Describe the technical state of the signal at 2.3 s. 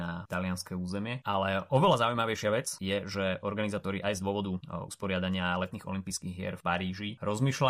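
At 2.3 s the signal sits inside a time-stretched section running from 1.86 to 6.40 s, sped to 1.35 times normal pace with pitch unchanged. The likely cause is software dropping short segments to shorten the passage, which leaves the speech rushed.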